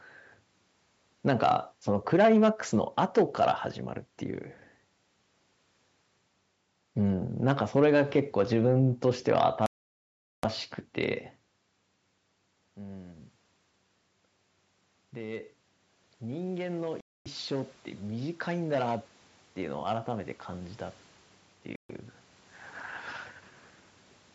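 Speech recording with two faults. Three dropouts cut the sound to silence: about 0.77 s from 9.66 s, 0.25 s from 17.01 s and 0.14 s from 21.76 s, each likely a Bluetooth stall where the headphone buffer ran dry awaiting resent packets. The waveform drops to a flat line and the spectrogram shows clean vertical gaps. From 15.13 s to 20.77 s, after the input level fell by about 17 dB, automatic gain rising lifts the level by about 10 dB, so speech and room noise swell together. The waveform envelope widens gradually, and the spectrogram's noise floor brightens along with the speech.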